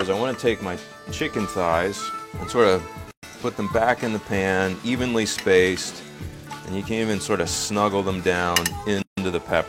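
At 3.11 s and again at 9.02 s the sound drops out for about 119 ms and 151 ms, then resumes where it stopped: a gap at a join of encoded pieces, from encoder delay and end padding left untrimmed.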